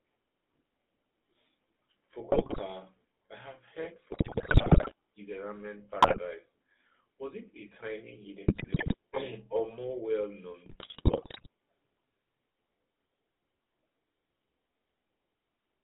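Speech here, and the whole thing has the buzzy, gravelly texture of the GSM full-rate codec. The codec rebuilds the voice from a vocal-tract filter driven by a sparse, regularly spaced pulse train, which fits a 13 kbps full-rate stream. The excitation is thinned out, so the voice comes across rough and coarse, and the damage is plainly audible. The line band sits at roughly 250 Hz to 3.7 kHz, so the lows are thin and there's no air on top. On top of that there are five bursts of GSM bit errors, at 2.32 to 2.61 s, 4.12 to 4.93 s, 6.02 to 6.19 s, 8.48 to 8.95 s and 10.66 to 11.47 s. In each one, corrupted filter, pitch or gain parameters reach the decoder, so frames come out with a bent spectrum or a sudden level jump. You hear that as squawks, pops and gargling. The 4.12 s burst is the longest and the most mangled.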